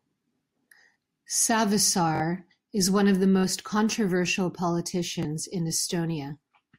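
Repeated buffers stutter the speech at 0.94–0.96 s, 2.16–2.20 s (just before "is one of the"), 3.39–3.44 s (just after "is one of the") and 5.23–5.25 s. Late audio made the device replay its last 21 ms block, which fits a 1024-sample buffer, once or twice, with hard joins. The result is an identical repeated fragment rather than a silent dropout gap.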